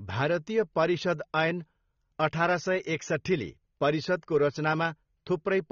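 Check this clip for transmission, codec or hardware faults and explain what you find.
A codec fault runs through the whole clip: the speech sounds like it was likely squeezed through AAC compression at a low bitrate, plausibly around 24 kbps. Nothing is present above about 6.9 kHz, because the encoder lowered its cut-off and quantised the remaining bands coarsely. The speech is dull and smeared, with sibilants and held sounds taking on a warbling, fizzy edge.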